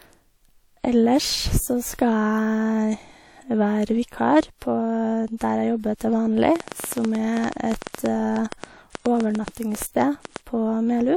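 From 6.56 s to 10.37 s a train of clicks runs over the speech: around 30 short pulses of much the same shape, arriving at about 8.2 per second with irregular spacing. The clicks stand out clearly, peaking roughly 15 dB above the speech, and are heard as an uneven ticking or popping. The cause is likely an external pulse source such as interference from nearby equipment, a faulty connection or a power supply problem.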